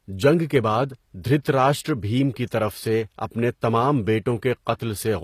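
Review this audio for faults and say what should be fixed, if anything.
HE-AAC compression, throughout: plainly audible codec damage, nothing above 14.9 kHz, treble likely rebuilt from copied lower bands under a coarse envelope, fitting a 24 kbps stream. Prevent it by sourcing or exporting the speech at a higher bitrate, or in a lossless format.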